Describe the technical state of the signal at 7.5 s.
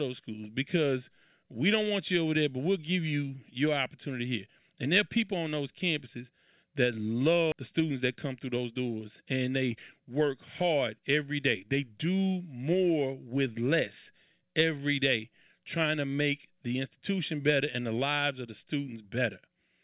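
A skip ahead at 7.52–7.54 s: roughly 0.7 s of speech was dropped, so "on those campuses that" jumps straight into "the students that" with no gap.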